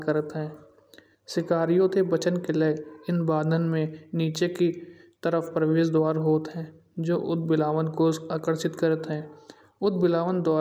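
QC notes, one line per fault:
Throughout: resampler restarted on every block. A low, rough buzz rides on the speech at 50 Hz and drops away in the pauses, so it follows the signal. Each 20 ms block was converted separately, which fits a change from 44.1 kHz to 48 kHz, so at every block edge the converter lacked the true neighbouring samples and left a small error. Fifty of these tiny ticks per second fuse into the buzz.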